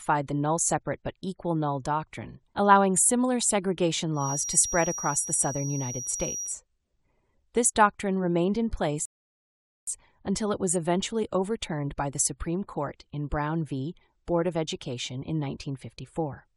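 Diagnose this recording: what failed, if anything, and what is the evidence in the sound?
A thin, steady whistle at 5.7 kHz sits behind the sound from 4.12 to 6.59 s, roughly 10 dB below it and swelling and fading slowly in level. On a spectrogram it is a single horizontal line. The likely cause is a feedback whistle: an acoustic loop from loudspeaker to microphone held just at the edge of ringing.

A rebuffering stall at the playback stage runs from 9.05 to 9.87 s. The sound drops to silence, then resumes exactly where it stopped, adding 0.82 s. The waveform shows a flat line and the spectrogram a blank vertical band. The player's buffer emptied and waited for more data to arrive.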